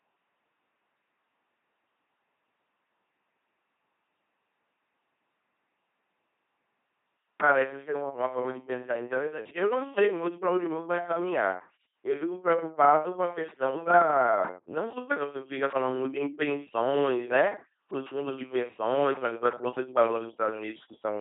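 Speech run through an LPC-10 vocoder for its entire length: heavy codec damage gives a buzzing, robotic tone, a 2.4 kbit/s character, and nothing above 3.7 kHz.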